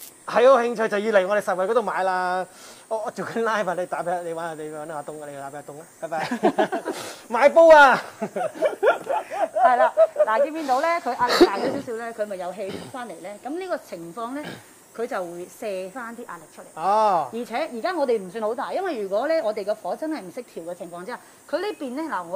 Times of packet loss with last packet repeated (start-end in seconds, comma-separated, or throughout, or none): none